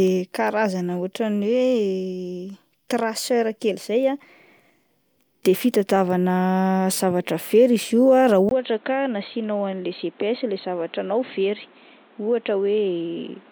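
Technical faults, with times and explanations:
8.49 to 13.51 s, input switched to a poorer device: the recording most likely moved mid-clip from its original microphone to a lower-grade input such as a headset's call profile. The change comes after a brief 20 ms silence. From there the speech is band-limited, with nothing above 4.2 kHz, so it turns dull and boxy. It also drops by about 5 dB and gains new background noise roughly 30 dB below the speech.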